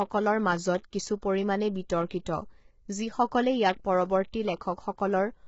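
From start to finish the speech carries heavy coding damage, likely from low-delay AAC compression such as AAC-ELD at a rate consistent with about 16 kbps. Its short frames resolve pitch harmonics poorly, so the voice turns rough and grainy, with noise between harmonics and nothing above 7.7 kHz.

Pre-echo occurs at 1.22 s, and again from 2.09 to 2.11 s, just after "কিছু পৰিমাণে". A sharp onset falls late in a transform block, so quantisation noise sized for the loud part spills into the quiet moment before it. Each attack is preceded by a brief hiss, about 14 ms and 20 ms long, and sounds smeared.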